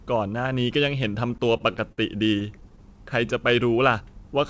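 Speech coming through a call path, with nothing above 8 kHz, which fits a wideband call codec like G.722. The problem is repeated stalls (stutter) in two bursts: from 1.38 to 1.99 s there are six hiccups, the longest about 54 ms, and from 2.39 to 2.79 s another six shorter ones, none longer than 12 ms. Packets were arriving late, the jitter buffer kept running dry, and the receiver stretched the last sound to cover each gap. Nothing actually goes missing, but those stretches drag and stutter.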